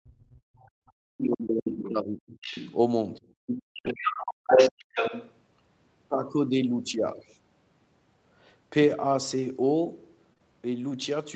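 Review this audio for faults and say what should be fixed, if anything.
Speech suppressed in double talk occurs from 0.02 to 2.35 s. The talker dips for most of those two seconds, at worst by about 40 dB, and a brief drop of about 20 dB follows at 3.2 s. The likely cause is the echo canceller attenuating both talkers because it could not separate near speech from loudspeaker echo. Tuning the double-talk detector, or using a headset, would prevent it.

The other side's voice leaks through at 1.84–1.89 s and 2.28–2.75 s, about 15 dB below the talker, and again at 3.47–3.63 s, about 5 dB below. From 3.83 to 5.34 s it sits about 5 dB above the talker. This is likely residual loudspeaker echo the canceller failed to remove. Better echo-path modelling, lower speaker volume, or a headset would stop it.

The background is gated by the echo canceller at 3.63–3.83 s and 4.34–4.46 s. The room sound drops by about 38 dB while the loudspeaker plays, then returns when the suppression releases. 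A gentler residual-echo suppressor, or comfort-noise fill, would keep the background steady.

A lost packet rebuilt from error correction covers 6.89–6.99 s. About 60 ms, consistent with three 20 ms frames, was played from the low-bitrate in-band copies carried by the following packets. That stretch sounds rougher and noisier. More network headroom or a larger jitter margin would reduce these losses.

Short concealed packet loss occurs in two back-to-back frames at 10.33–10.38 s and 10.38–10.41 s. The decoder extended the previous sound to fill each 20 ms gap, leaving a brief smear before blending back. The audio above 8 kHz is absent throughout, as expected for this Opus bandwidth setting. Enabling forward error correction and a steadier network path would help avoid it.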